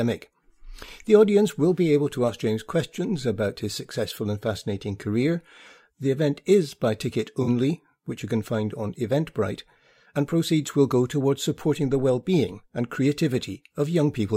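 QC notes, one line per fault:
7.43–7.49 s, AAC frame loss with concealment: a 43 ms gap, fitting two lost frames, is refilled from earlier spectrum, briefly smearing the sound after "event is by ticket".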